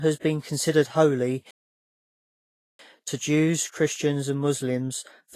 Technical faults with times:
0.00-5.35 Vorbis compression
1.51-2.79 playback stall

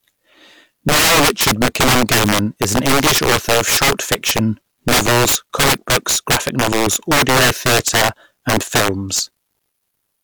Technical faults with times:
0.00-10.24 integer overflow

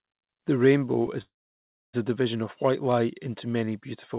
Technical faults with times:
1.21-1.95 call audio freeze

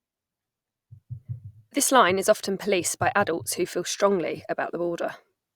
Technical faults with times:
none

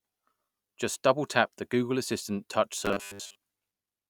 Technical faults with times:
2.86-3.36 robotic sound from repeated short buffers

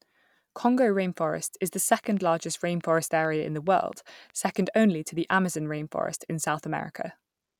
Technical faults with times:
2.04-4.50 train of clicks

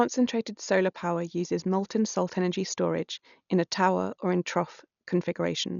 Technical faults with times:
0.00-5.80 Dolby Digital compression

